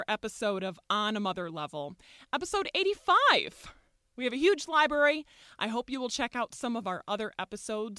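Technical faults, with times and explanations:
No technical faults can be heard in this speech.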